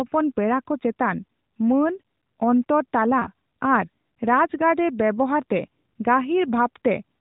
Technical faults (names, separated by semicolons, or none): lost AMR speech frames